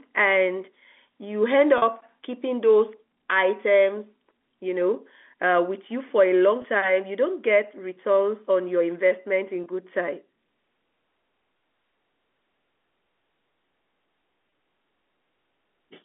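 At 1.78 to 1.82 s, 6.62 to 6.64 s, 9.64 to 9.66 s and 14.50 to 14.52 s, packet loss with pitch repetition fills each gap with a briefly held, buzzy copy of the last pitch period. The first gap, 40 ms, fits two lost packets, the others one, heard through the 250 Hz to 3.5 kHz telephone band.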